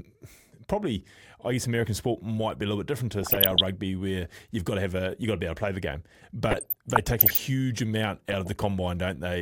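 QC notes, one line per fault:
3.20–3.61 s, 6.48–7.38 s and 8.29–8.56 s, DAB burbling: weak-signal bit errors slip past correction, so wrong samples in single MP2 sub-bands give short blips of noise over the speech.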